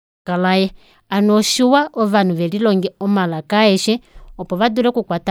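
No technical faults can be heard in this speech recording; the level rises smoothly from the opening with an editor's fade-in that reaches full level by about 0.3 s, without any click or hard edge.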